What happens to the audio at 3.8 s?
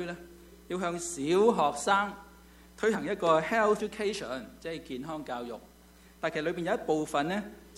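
At 3.79 s there is a brief blip from damaged data in the compressed stream. Corrupted bytes make the decoder misread a frame and lose sync until the next frame header.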